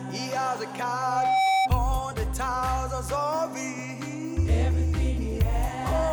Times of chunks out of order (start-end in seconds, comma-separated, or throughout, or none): none